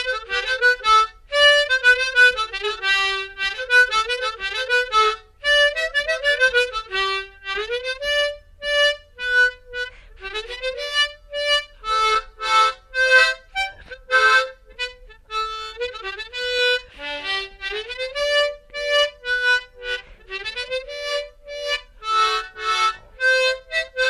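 No technical faults turn up anywhere in this audio, so there is nothing to describe in time order.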